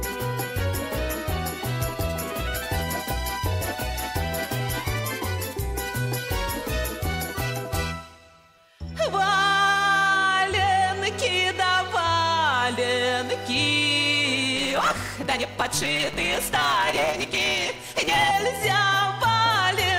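From 14.56 s to 18.32 s there is a block size mismatch, with the excess truncated. One stage hands over blocks longer than the next stage takes in, and the tail of each block is discarded. Each cut produces a hard join, so a buzz at about 150 Hz sits under the sound. Because part of every block is dropped, the audio races ahead at 1.6 times normal speed while keeping roughly its original pitch. That ratio fits 512-sample blocks being read as 320.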